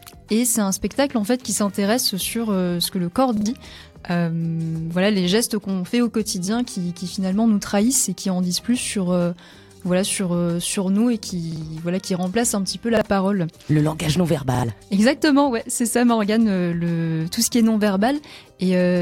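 There's a repeated buffer fault here, showing up four times: at 3.37 s and 14.55 s the same 43 ms slice plays three times in a row, and at 11.52 s and 12.97 s it plays twice. Each repeat has a hard join, so you hear a quick stutter. Fresh audio didn't reach the device in time, so it replayed its last block, which fits a 2048-sample buffer. Those gaps swallow roughly a tenth of a second and roughly 40 ms of sound, respectively.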